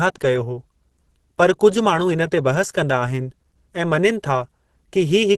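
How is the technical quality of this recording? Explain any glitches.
The recording has plainly audible codec damage throughout. The likely cause is Opus compression at a low bitrate, which fits roughly 16 kbps. At that rate the encoder works in its hybrid speech mode and cannot spend bits on fine spectral detail. It also trims the bandwidth, so nothing is present above 12.1 kHz. Across the whole speech clip this gives a muffled, hoarse tone, with the airy top end missing.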